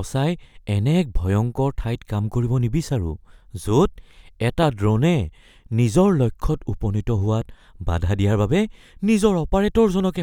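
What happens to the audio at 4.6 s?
A single sharp pop, roughly 10 dB louder than the speech, cracks through at 4.63 to 4.65 s while the speech carries on underneath. This loud pop is likely a sudden voltage pulse, perhaps from a switch, static or a driver glitch.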